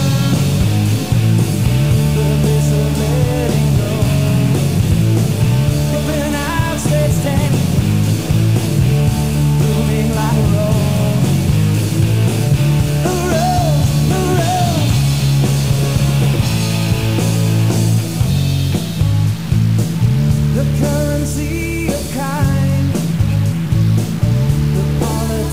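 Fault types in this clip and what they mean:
Stuck bit: A distortion rides on the audio for the whole clip, and the quieter stretches are filled with a noise floor instead of falling silent. This is most likely one bit of the samples being held at a fixed value. About half the sample values end up off by that bit's weight in a pattern that follows the waveform, and the bit also changes with the sign of small values near zero, so the gaps hiss.
Compressed frames skipped: The audio jumps forward five times, at 4.86–4.89 s, 5.92–5.96 s, 7.46–7.49 s, 10.29–10.33 s and 16.33–16.37 s. Each join lasts roughly 30–40 ms. About 0.4 s is lost at each of the first three jumps, about half a second at the fourth and about 0.7 s at the last. The lost lengths fit whole runs of frames of about 46.4 ms that were never decoded.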